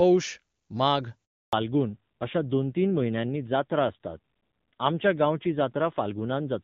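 At 1.25 s the speech drops out in a handover gap: the call was switching networks and no frames came through for 280 ms, so the sound dies away quickly and sits silent until about 1.53 s. Whatever was said in that stretch is simply gone.

Right as the audio comes back at 1.53 s, there's a fallback to narrowband that lasts to the end. Up to the gap, the wideband HD Voice sound is clean and full, consistent with a high AMR-WB rate. After it, nothing above 4 kHz survives, so the speech turns duller and rougher, which points to a low-rate AMR narrowband mode taking over.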